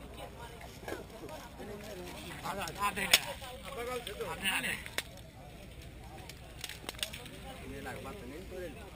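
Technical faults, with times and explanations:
Throughout: imaging from sample-and-hold upsampling. Each original sample looks to have simply been repeated to fill the higher rate, with no smoothing filter afterwards, which fits a jump from 12 kHz up to 48 kHz. The result is a mirrored copy of the spectrum folded into the 6 to 12 kHz band, only about 9 dB below the wanted sound, so you get a bright metallic fizz that rises and falls with the level and slides the wrong way when the pitch moves.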